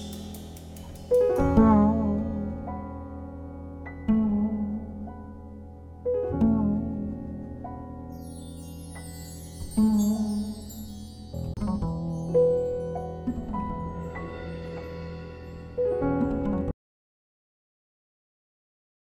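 At 11.54 s there is a CD skip. The laser jumped tracks, so the player mutes for about 30 ms and resumes elsewhere on the disc. From 16.71 s to the end, an audio dropout to silence occurs. The sound cuts out to silence, with no room tone. A lost input is the likely cause.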